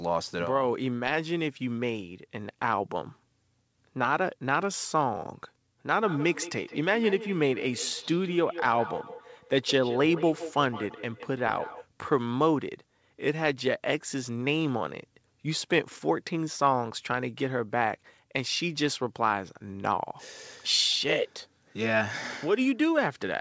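Feedback echo between two devices runs from 5.96 to 11.87 s. A second device on the call replays this speech, and the original microphone picks it up again. Each syllable returns roughly every 150 ms, thinner and ringing, peaking at about 13 dB below the speech.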